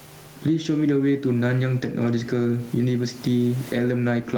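Gain pumping runs through the whole clip, likely from gain set far too high into a fast limiter. The gain swings by around 15 dB. The waveform shows loud and soft parts squashed closer in level.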